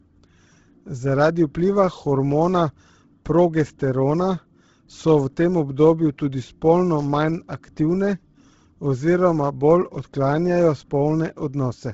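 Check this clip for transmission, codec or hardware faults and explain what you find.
One fault runs through the whole clip: Bluetooth LC3 compression, likely, heard as heavy damage throughout. Noise-filled upper bands give the speech a grainy, breathy edge that fits a low LC3 bitrate, unlike plain low-pass filtering.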